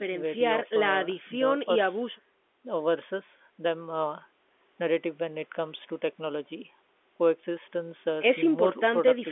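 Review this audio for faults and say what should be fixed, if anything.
Nothing here needs fixing: it's just an ordinary phone line doing its job, with the sound held to the usual telephone band and nothing above 3.7 kHz.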